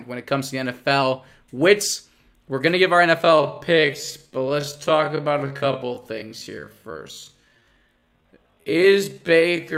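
From 3.18 s, just after "going to give our", the speech becomes a time-stretched section, slowed to 0.54 times its pace through the end while pitch stays put. It drags, likely from software repeating short pieces to lengthen the audio.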